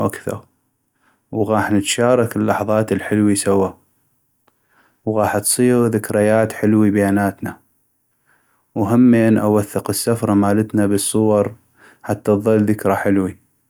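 No technical faults can be heard anywhere in this recording.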